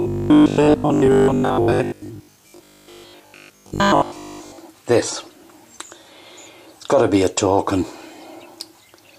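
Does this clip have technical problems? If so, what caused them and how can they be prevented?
Yes. From 0.02 s to 4.58 s there's robotic sound from repeated short buffers, a rigid, metallic buzz at 50 Hz that sits over the audio and only loosely follows it. That rate fits a 20 ms chunk being replayed, most likely because new audio was reaching the software too seldom, so it kept looping the last bit while the real material was skipped, which was most of that stretch. Giving the audio path a larger buffer and enough processing headroom keeps fresh audio arriving before the old chunk runs out.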